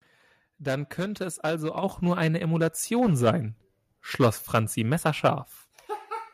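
A speech clip with one fault: the microphone volume stepped up at 1.83 s, when the call software judged the input too quiet and raised the device's gain by about 6 dB in a single jump. Voice and background noise grow louder together at that instant. On a waveform the envelope widens abruptly, and a spectrogram shows every band, noise floor included, brightening at once.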